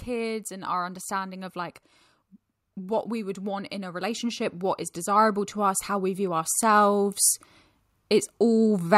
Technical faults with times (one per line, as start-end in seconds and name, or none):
0.05-1.84 automatic gain rising
2.74-4.49 automatic gain rising
5.04-7.22 automatic gain rising